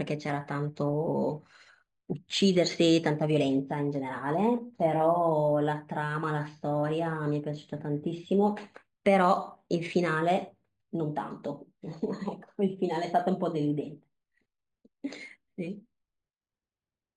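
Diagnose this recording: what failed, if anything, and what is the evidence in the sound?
Imaging from linear upsampling at the sample-rate conversion stage, throughout: 11 kHz speech was line-interpolated to 48 kHz, so a spectrogram shows a faint mirrored band from 5.5 to 11 kHz, about 30 dB down, that puts a metallic shimmer on sibilants.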